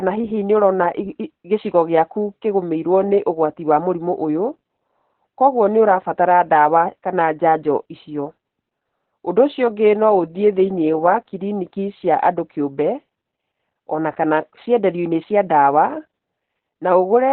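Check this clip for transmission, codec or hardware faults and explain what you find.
There's one fault, running the whole clip: Opus voice compression in narrowband SILK mode, which fits roughly 8 kbps. Nothing above 4.4 kHz survives, so speech sounds muffled, hoarse and slightly robotic.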